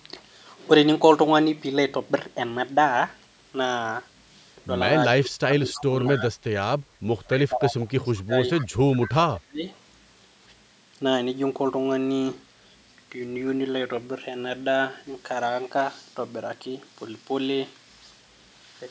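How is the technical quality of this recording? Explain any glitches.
The recording has two linked call-audio faults in the middle section, between about 5.2 and 9.8 s. The voice carries no content above 8 kHz, which is consistent with call microphone processing.

Speech suppressed in double talk occurs from 5.19 to 6.34 s, 7.28 to 8.33 s and 8.68 to 9.67 s. The voice dips by up to about 30 dB (about 20 dB in the middle stretch) for roughly three-quarters of a second to a second at a time. This is likely an echo canceller that turned down its own talker while the far side spoke.

Echo leak appears at 5.72 to 5.84 s, 8.58 to 8.67 s and 9.73 to 9.78 s as short scraps of a delayed copy of the voice, trailing by 214 ms. They sit about 20 dB below the speech, and about 40 dB below at the last one. This is likely residual loudspeaker pickup that the canceller failed to remove. The fixed delay sets it apart from room reverberation.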